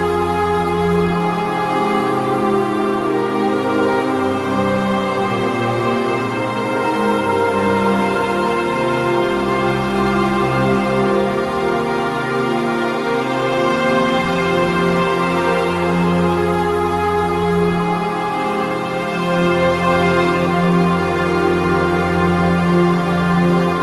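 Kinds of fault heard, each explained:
No technical faults are audible anywhere in the recording.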